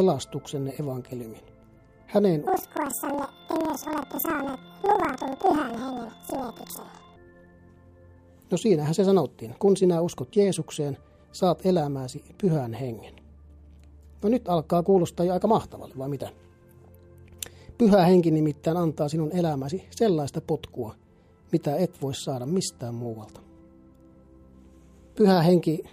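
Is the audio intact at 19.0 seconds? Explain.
Yes, at 19.0 seconds the audio plays through intact, with no dropout, click, distortion or other fault to be heard at that point.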